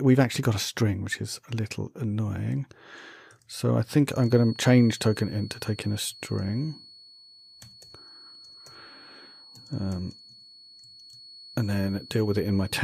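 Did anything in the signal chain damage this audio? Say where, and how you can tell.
Yes. A feedback whistle appears at 4.05 s and runs to the end of the clip. It is a thin, steady tone near 4.4 kHz, sitting about 25 dB under the main sound and swelling and fading slowly in level. The stage is the acoustic path between playback and the microphone. The likely cause is a loudspeaker feeding back into the microphone with loop gain just under the runaway point. One frequency keeps ringing without building up.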